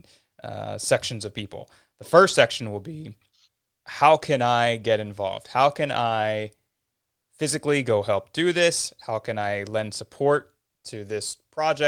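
Lost packets rebuilt from error correction occur at 0.95–1.01 s just before "of people", 2.29–2.31 s before "section will be", 4.75–4.81 s right after "how can I", and 6.05–6.11 s. Each time the decoder filled the missing stretch, about 40 ms (20 ms at 2.29 s), from a low-bitrate backup copy carried in the following packet. So nothing drops out, but those instants turn briefly coarse and noisy.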